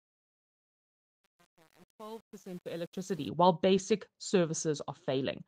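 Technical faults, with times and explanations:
0.00–3.28 s, truncation distortion on a fade: the fade-in grits until 3.08 s, as undithered steps, fitting 8-bit resolution, square off the quiet waveform.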